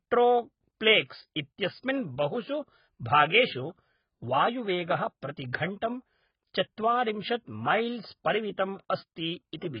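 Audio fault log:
Throughout, AAC compression: dull, smeared speech with fizzy, warbling sibilants and nothing above 5.1 kHz, likely from heavy AAC-LC coding at a very low bitrate.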